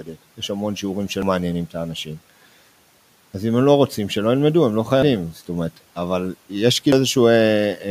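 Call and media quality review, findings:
Opening speech swallowed, 0 to 0.17 s, turned down by about 12 dB: speech cut by the noise suppressor, which mistook the opening speech for background and attenuated it.

Skips at 1.22, 3.12, 5.02 and 6.92 s, each losing roughly a tenth of a second, sides butted together: audio missing between chunks, likely from a recorder working in 2 s blocks.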